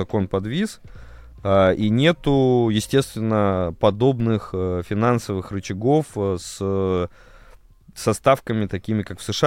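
At 1.84 s and again at 4.20 s the waveform's zero line jumps by about -31 dBFS, a DC step, and each offset then drains away through a 5 Hz high-pass. Both jumps land as a brief low thump while the speech carries on unaltered.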